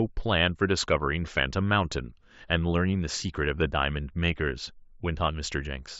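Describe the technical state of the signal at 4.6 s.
At 4.6 s the speech is intact, with nothing beyond the light graininess and roughly 8 kHz bandwidth of the Bluetooth mSBC headset path it passes through.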